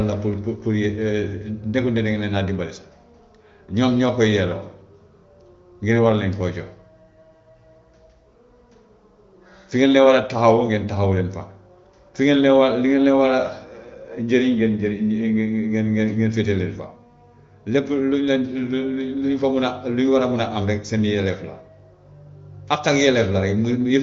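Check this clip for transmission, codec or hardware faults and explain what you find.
Nothing here points to a transmission, codec or hardware problem; the speech comes through an AMR wideband (HD Voice) link at what sounds like the 23.05 kbit/s rate, so it stops at 7 kHz and any coding damage is faint at most.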